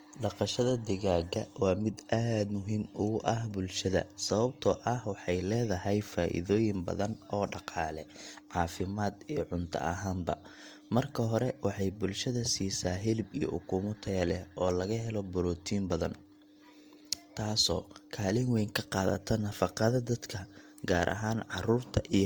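Transcoding between lossy codecs runs throughout the speech, from start to finish. The sound carries two layers of coding damage at once: the artefacts of both codecs are heard together, and nothing is heard above 20.1 kHz. The likely cause is an HE-AAC encode later re-encoded to Opus at a low bitrate. The second codec wasted bits reproducing the first one's artefacts and then added its own.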